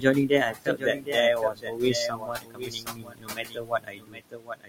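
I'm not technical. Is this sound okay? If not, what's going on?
No, there are a few problems.

There's a doubled audio track: a quieter copy of the speech trails about seven tenths of a second behind, likely from a second, slower recording path.

There are noise suppressor artifacts throughout. A noise-removal filter pushes the background noise down between words, so it pumps up and down.

There's also speech cut by the noise suppressor. From the start to 1.17 s, and again from 1.34 s to the end, that filter mistook parts of the speech for noise, so some soft sounds and word endings come out swallowed or faint. The room noise underneath is just part of the recording.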